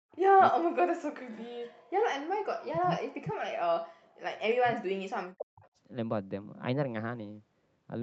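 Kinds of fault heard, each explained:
Speech suppressed in double talk: The speech dips sharply, by roughly 40 dB at its deepest, in four stretches: 0 to 0.13 s, 0.49 to 1.4 s, 2.39 to 4.05 s, and 4.58 to 5.65 s. It fades or breaks into pieces. This is likely an echo canceller muting its own talker while both sides spoke.
Echo leak: A brief, faint copy of the speech surfaces around 4.5 s, about 25 dB below the main level and trailing it by 300 ms. It lasts only a moment. This is likely loudspeaker sound the echo canceller failed to remove and sent back.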